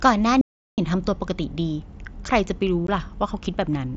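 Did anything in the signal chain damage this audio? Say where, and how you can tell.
Yes, in two places. From 0.41 to 0.78 s there is an audio dropout to silence lasting about 0.37 s. The sound stops mid-flow and returns abruptly, and the gap is silent with no room tone underneath. On a waveform it is a dead-flat line. On a spectrogram it is a fully blank vertical strip. This likely happened at the input stage, where a lost device or link left the recorder writing silence.

At 2.87 s there is unconcealed Bluetooth headset packet loss, a 15 ms hole with hard edges. Its length fits two lost mSBC frames on the headset-to-phone radio link. Nothing was synthesised to cover the gap, so silence or an idle pattern replaced the speech. A spectrogram shows a thin vertical gap, all within the wideband mSBC bandwidth that stops at 8 kHz.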